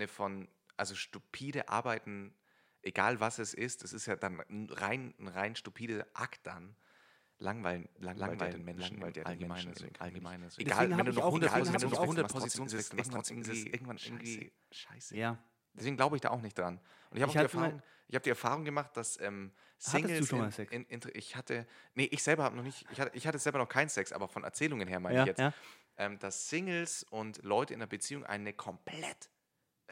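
From 8.15 s to 15.19 s a doubled audio track appears. An equally loud, full-band copy of the speech trails by roughly 0.7 s and cuts in and out abruptly, likely captured again by a slower path. A spectrogram shows each pattern repeated 0.7 s later.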